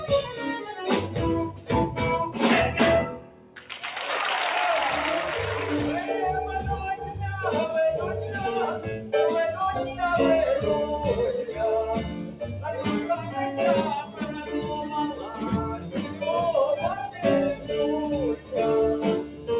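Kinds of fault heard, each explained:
Noise suppressor applied to music or sounds: A suppressor tuned for speech stayed active through the whole clip and treats steady tones, ambience and reverb as noise. The level keeps swinging by about 5 dB, so the audio pumps and thins within the narrow G.711 call band, with nothing above 4 kHz.
Sound cut by the noise suppressor: In five stretches (0.0–1.7, 3.1–3.7, 11.49–12.58, 14.04–16.22 and 17.15–19.49 s), the suppressor mistook held or fading sound for noise and pushed it down harder, by up to about 10 dB, sinking sustains and cutting decays short.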